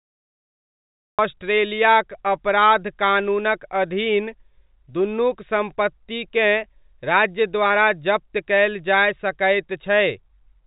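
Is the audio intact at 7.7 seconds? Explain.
No. Between 7.68 and 7.72 s there is a short concealed packet loss: about 20 ms of audio arrived too late for the decoder, and the receiver bridged the gap by extending the preceding sound before crossfading back. This leaves a brief smear or wobble.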